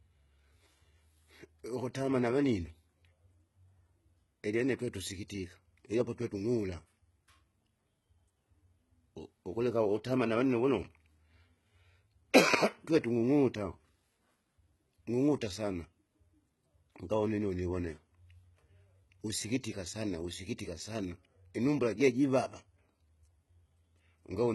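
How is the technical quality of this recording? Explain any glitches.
The recording carries one fault running through the whole clip, heavy HE-AAC compression damage, most likely from the codec. The treble sounds synthetic: s sounds come out gritty, metallic and lispy, and nothing reaches above 11.8 kHz. Upper bands are rebuilt from copied lower ones whose harmonics misalign, which fits a bitrate near 16 kbps. A plain low-pass would sound dull instead; here the top is present but false.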